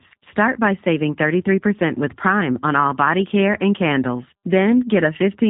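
G.729 codec damage runs through the whole clip, from start to finish, and is plainly audible. The speech has been squeezed through a low-rate model that keeps only a vocal tract filter, a pitch predictor and a handful of pulses per short frame, which fits roughly 8 kbit/s. Everything above 3.8 kHz is gone, so sibilants lose their edge, and the voice comes out rough and faintly synthetic.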